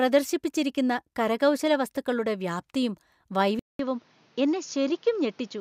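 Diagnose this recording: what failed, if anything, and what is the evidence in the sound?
At 3.59 s the speech cuts out for 200 ms, then returns changed until the end. Above 7 kHz the band is now empty, so it sounds duller and boxier. The level falls by around 5 dB. A new noise floor appears, roughly 35 dB under the speech. This is likely an input switched to a poorer device, at the driver and device-selection stage. A narrower microphone path brings its own tone, gain and background noise.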